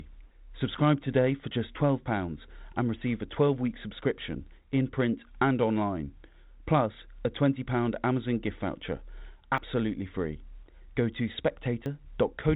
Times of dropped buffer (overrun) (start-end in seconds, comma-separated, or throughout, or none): 9.58, 11.86